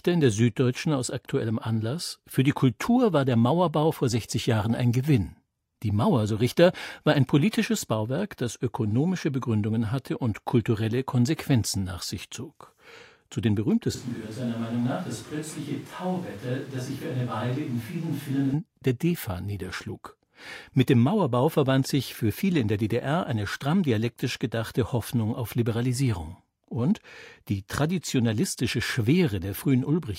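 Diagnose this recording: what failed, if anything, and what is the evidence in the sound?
Capture stage. From 13.95 to 18.54 s, speech turns abruptly roomy, thin, about 5 dB quieter and noisier: likely a switch to a distant microphone.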